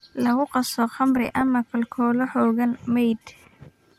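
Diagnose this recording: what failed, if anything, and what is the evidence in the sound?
DAB burbling at the codec stage, from 1.17 to 1.41 s and again from 3.22 to 3.73 s over the speech: short noise blips in single sub-bands. Residual bit errors at a fraction of a percent slip past error correction, corrupting MP2 samples across successive frames.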